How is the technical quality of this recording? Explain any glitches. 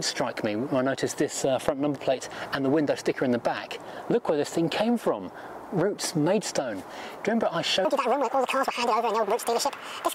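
There's one real problem, right at the end. From 7.85 s to 10.14 s there's a section at the wrong speed: the audio runs 1.67 times too fast, so everything jumps up about ten semitones and sounds rushed and chipmunky. That's likely from the section being played against the wrong clock.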